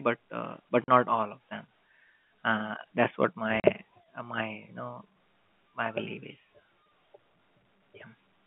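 At 0.84 s, right after "uh but", the speech drops out for 40 ms, and a second 40 ms hole follows at 3.60 s. Both are packet loss filled with silence: audio never reached the receiver, and it inserted digital silence instead of concealing the gap. Each gap fits two 20 ms packets. The signal cuts off and resumes abruptly within the narrow telephone band of the G.711 line.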